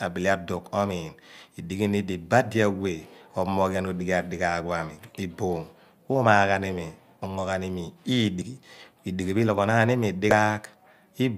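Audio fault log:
10.29–10.32 s compressed frames skipped: frames missing or refused by the decoder go unplayed; the speech jumps ahead about 50 ms.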